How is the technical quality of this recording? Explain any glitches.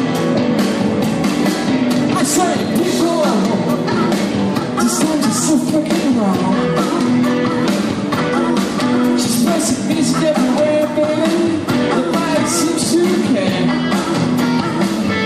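No glitches or technical faults can be heard anywhere in the recording, and the signal stays steady and intact throughout.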